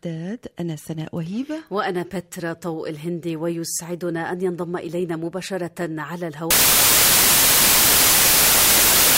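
From 6.51 s to the end at 9.18 s, samples built from the wrong bytes turn the sound into loud, harsh broadband noise, unlike steady added hiss.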